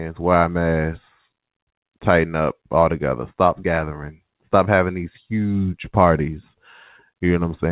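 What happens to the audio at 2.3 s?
Nothing goes wrong at 2.3 s: the speech carries on intact through the call path, with the narrowband telephone sound of a G.711 mu-law link and nothing above 4 kHz.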